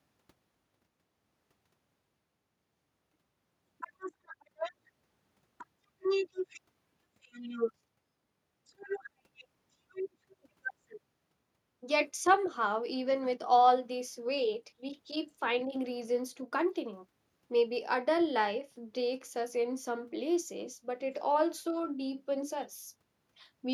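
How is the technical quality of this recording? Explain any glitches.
No technical faults can be heard in this recording.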